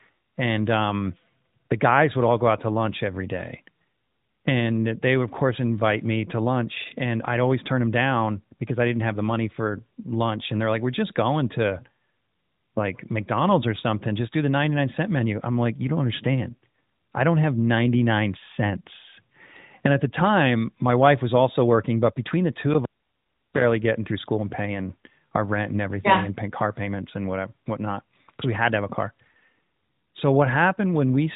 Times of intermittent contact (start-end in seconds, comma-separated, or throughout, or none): 22.73-23.64